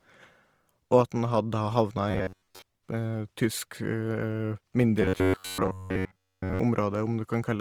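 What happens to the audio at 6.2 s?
At 6.2 s the playback is likely starved of new audio, so the software keeps repeating a short stretch of roughly 11 ms instead of playing fresh material. This robotic sound from repeated short buffers runs from 5.02 to 6.59 s. The loop imposes a fixed 93.8 Hz buzz, and with most of the real audio skipped, the speech turns into a rigid, metallic buzz.

Underneath, the whole clip carries Opus compression, likely in its CELT music mode at a low rate that fits about 24 kbps. Bands short of bits are filled with folded or noise-like content, so the speech sounds plainly grainy and rough, though the bandwidth stays full.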